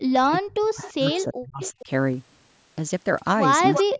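A speech recording in which the voice dips sharply, by as much as about 40 dB, and breaks up from 0.17 to 1.89 s and again from 3.83 s to the end, likely speech suppressed in double talk as the echo canceller ducked both sides. Faint delayed copies trail the voice at 0.82, 1.11, 1.6 to 1.84 and 3.73 to 3.84 s, the last nearly as loud as the speech, most likely an echo leak returning the loudspeaker signal about 342 ms late.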